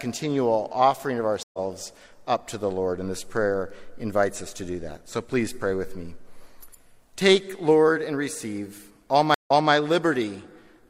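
Stream reconnect at 1.43 to 1.59 s and 9.34 to 9.72 s: the connection dropped, leaving about 106 ms and 121 ms of silence, and a fresh decoder picked up mid-stream. The sound resumes roughly 150 ms later the first time, then 256 ms earlier, repeating material.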